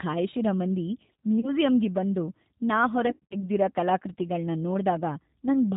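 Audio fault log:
Throughout, G.729 codec: the 8 kbit/s model rebuilds speech from a filter and a few pulses, so it's plainly rough and synthetic, with nothing above 4 kHz.
1.40–1.50 s, VoIP packet loss concealed by the speech codec: about 30 ms went missing, so the decoder stretches the last sound into a fading buzz or noise before "ಬಂದು ನಾ" recovers.
3.07–3.44 s, VoIP packet loss concealed by the speech codec: after "ಬಂದು ನಾ", 140 ms of gaps scattered over about 240 ms, longest run 50 ms, leave the speech weak or distorted as concealment keeps rebuilding.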